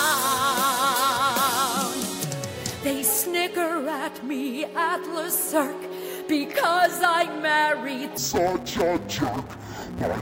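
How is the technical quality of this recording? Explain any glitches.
The recording has one clear fault near the end. From 8.18 s to 10.2 s, interleaved audio is read as planar. Each 5.8 ms block, which fits a 256-sample block, splits wrongly into left and right halves. The sound turns dull and robotic, buzzing at about 172 Hz.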